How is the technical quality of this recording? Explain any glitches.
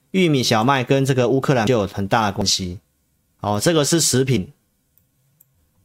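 The speech has three audible skips. A likely dropped buffer (overrun) at 1.67, 2.42 and 4.37 s: samples were overwritten before being read, so the sound jumps ahead, losing roughly 150, 100 and 50 ms respectively.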